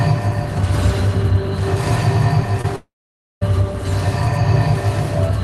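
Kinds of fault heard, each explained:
Short concealed packet loss: at 2.61 to 2.66 s, about 20 ms of audio failed to reach the decoder in time. The receiver covered the gap by extending the preceding sound, pitched if voiced or as shaped noise if not, for about 23 ms, then crossfaded back into the real signal. The result is a brief smear or wobble just before the larger break, over the Opus coding texture of the call path.
Long network dropout: from 2.76 to 3.43 s, about 660 ms of audio goes missing, most likely because the network stopped delivering packets for that stretch. The decoder first continues the last sound as a fading buzz or hiss, but the fill soon runs out, leaving about 530 ms of silence or near-silence. When the audio returns at 3.43 s, it picks up later in the stream, with the lost portion never played.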